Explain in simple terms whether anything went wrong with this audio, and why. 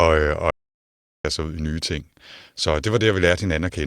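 An audio dropout to silence runs from 0.51 to 1.25 s. The speech cuts out for about 0.74 s and returns at "sig ud i nye". The gap is total silence, with not even room sound, likely because the input was briefly lost while recording carried on.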